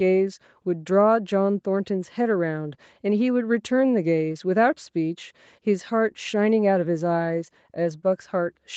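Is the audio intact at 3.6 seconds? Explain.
Yes, the speech at 3.6 seconds is intact, with no dropout, glitch or other fault at that moment.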